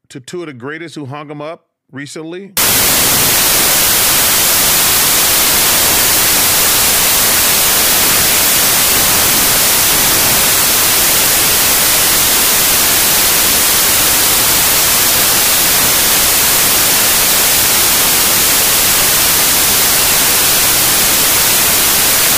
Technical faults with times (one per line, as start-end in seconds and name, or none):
2.57-22.38 samples built from the wrong bytes